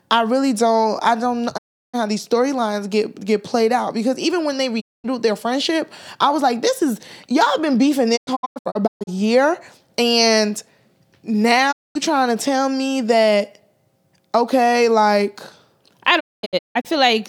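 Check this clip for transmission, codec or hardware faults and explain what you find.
Five digital broadcast dropouts break up the speech: at 1.56 to 1.96 s after "really don't I don't", at 4.80 to 5.06 s before "their friendship I was", at 8.16 to 9.09 s as several short holes, at 11.71 to 11.97 s, and at 16.19 to 16.87 s, again scattered. Each time the receiver stops getting good frames and mutes with a 20 ms fade, so the sound vanishes and returns. Whatever was sent during those gaps is lost. On a waveform each one shows as a flat line with a tapered edge, and on a spectrogram as a clean full-band blank column.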